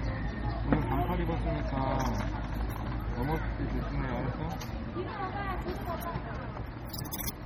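Throughout the clip the audio has a watery, swirling texture and smeared attacks, heavy damage likely from MP3 compression at a low bitrate, consistent with about 32 kbps. Weak frequency components flicker in and out from frame to frame, and nothing remains above 21.5 kHz.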